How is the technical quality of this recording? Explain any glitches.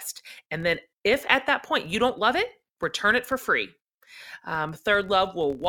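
The recording has one fault that persists from start to finish: a filter restarted on every block. The filter loses its memory at each block boundary and starts again from silence, so each block opens with a small transient. In this speech the ticks form a buzz near 43.1 Hz, which fits a 1024-sample block. Unlike steady mains hum, the buzz rises and falls with the speech level and vanishes in pauses.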